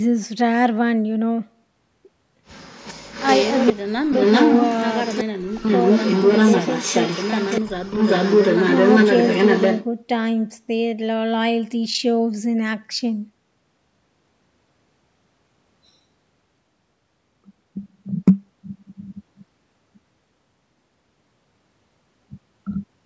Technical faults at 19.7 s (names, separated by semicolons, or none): none